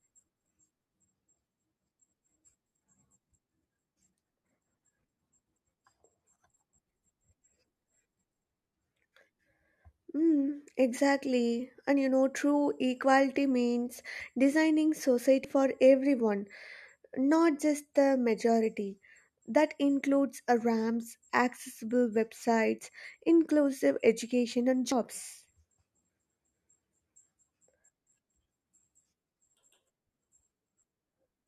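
Speech with three abrupt skips at 4.44, 15.45 and 24.92 s, each a jump where about a tenth of a second of sound is missing, most likely a dropped buffer (overrun). The waveform shows a hard discontinuity rather than a gap, and the spectrogram shows a thin vertical broadband line where the two sides are joined.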